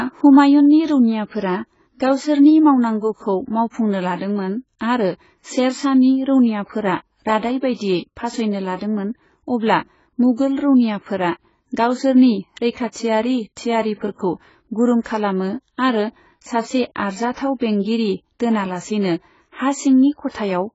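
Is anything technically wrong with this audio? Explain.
Yes, there is heavy codec damage. Throughout, the speech is dull and smeared with warbling sibilants, likely from AAC compression at a very low bitrate, fitting about 16 kbps. A spectrogram shows a hard ceiling at 7.7 kHz.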